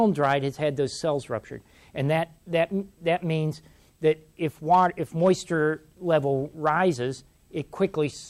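Brief hard clipping crackles on peaks at 0.23–0.34 s, 4.72–4.86 s, 5.25–5.31 s and 6.67–6.70 s, where the signal overshoots the stage's ceiling by about 1 to 3 dB and is sheared flat. Unlike soft saturation's rounded warmth, these abrupt edges give sharp, brittle grit confined to those moments.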